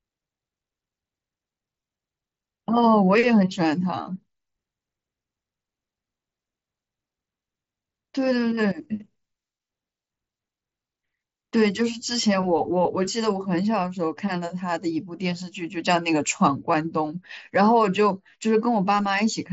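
Nothing stood out on listening to this speech, which comes through a Bluetooth mSBC headset path with its top end stopping at about 7.7 kHz, as that wideband link normally does.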